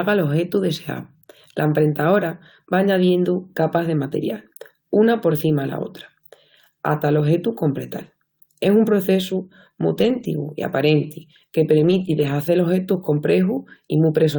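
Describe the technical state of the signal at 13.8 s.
At 13.8 s the speech signal is intact, with no fault present at that moment.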